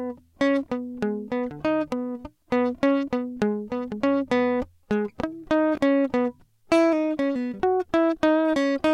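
At 5.75 to 5.78 s the music has chunks out of order: one 5.8 ms slice arrives three chunks late and plays after the ones meant to follow it. The result is a brief jumbled moment at the hard joins. Unlike a dropout, no audio goes missing.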